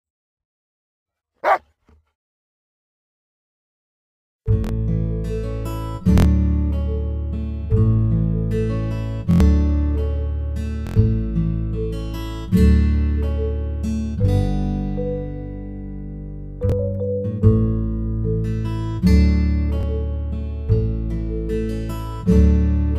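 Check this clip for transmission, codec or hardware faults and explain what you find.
The clip has one fault type, a repeated buffer, occurring six times: at 4.64, 6.18, 9.31, 10.87, 16.70 and 19.81 s. Each time new audio arrived late, so the device replayed its last block of about 23 ms, which fits a 1024-sample buffer, between one and four extra times. The result is a hard-edged stutter lasting roughly 20 to 100 ms, with the longest at 9.31 and 10.87 s.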